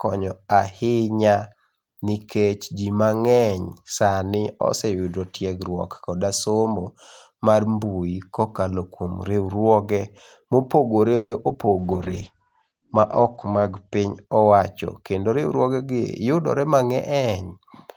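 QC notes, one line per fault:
11.15–11.33 s, call audio freeze: Packets were likely held up in transit and the jitter buffer ran dry, so the receiver stretched the last sound into a fading buzz for about 160 ms. When delivery resumed, playback picked up where it stopped, adding a pause without losing audio.
11.41 s and 11.48 s, short concealed packet loss: Each time, about 20 ms of audio never reached the decoder. The receiver bridged each hole by extending the preceding sound before blending back, which is heard as two quick smears or wobbles in close succession.
11.53–11.56 s, skip ahead: Audio that was already queued behind a dropped stretch let playback jump forward. Roughly 70 ms is missing, and the two sides are spliced almost directly, so the sound lurches ahead with a clipped fragment and barely any gap.
11.65–11.87 s and 12.69–13.01 s, jitter buffer slow-down: Running low on reserve, the receiver repeated single pitch periods many times to add about 40 ms each time. 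Delivery drops to 85% and then 90% speed at unchanged pitch, so sounds drag.
11.79–15.17 s, call bitrate drop: The bandwidth estimate fell and the encoder went from 32 to 11 kbps, holding the lowest rate for about 1.6 s. Coarser coding and a cutoff narrowing from 20 kHz to 8 kHz leave the sound dull, rough and watery until it recovers.
14.24–14.62 s and 15.02–15.85 s, jitter buffer speed-up: With too much audio queued, the receiver cut out short pitch-period pieces again and again, removing about 70 ms and then about 100 ms. Playback runs at 119% and then 111% speed at the same pitch, sounding rushed.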